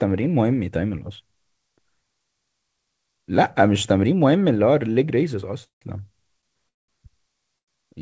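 At 5.64–5.83 s and 6.69–6.90 s the speech drops into a fading buzz, then silence, and resumes intact: a call audio freeze, likely from packets delayed until the jitter buffer emptied. At 7.58–7.70 s a short stall from a late packet holds a sound for about 92 ms with a slight buzz before the speech continues. The speech has nothing above 8 kHz, consistent with a G.722 call codec.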